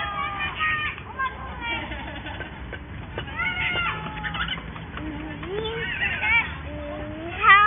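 No faults detected anywhere in this recording of sounds.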